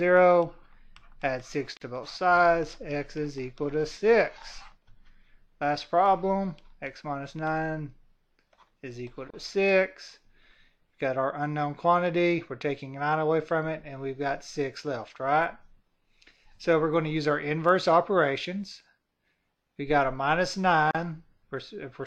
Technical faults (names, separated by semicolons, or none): gap at a join of encoded pieces